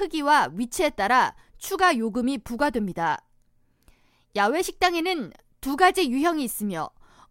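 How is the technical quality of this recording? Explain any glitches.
No technical faults can be heard anywhere in the recording: the speech signal stays continuous and intact throughout, with nothing in it that needs explaining.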